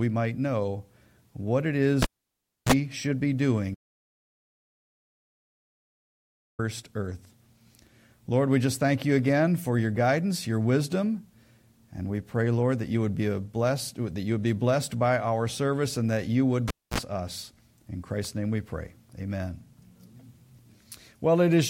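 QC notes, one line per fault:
2.02–2.72 s and 16.68–16.99 s, cable pulled and plugged in: each event opens with a sharp pop, falls to near silence, gives a brief 60 Hz mains buzz, then pops again as the sound returns. The live connector left its socket, about 0.65 s unplugged the first time and about 0.26 s the second. The buzz, roughly 31 ms and 45 ms, is the moment only the tip touched, so the input picked up hum before the full contact closed.
3.75–6.59 s, audio dropout to silence: the sound cuts off mid-flow and resumes abruptly after 2.84 s of silence, with no room tone or noise floor underneath, so the gap sounds dead rather than quiet. Everything in that span is missing. The likely cause is a lost input, such as a disconnected device, a failed link or an accidental mute, while the recorder kept writing silence.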